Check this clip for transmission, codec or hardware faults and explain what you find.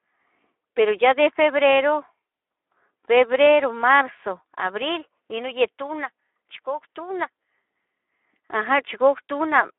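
There's one fault, and it runs the whole clip: Speex codec damage on the speech. Everything sits in a narrow telephone-style band of roughly 300 Hz to 3.5 kHz, with nothing at all above 3.8 kHz. The codec is clearly starved of bits for the excitation signal, which points to a low setting around 11 kbps. So it can't rebuild the fine detail of the voice and substitutes approximations. You hear that as a grainy, hoarse, plainly audible edge on the voice.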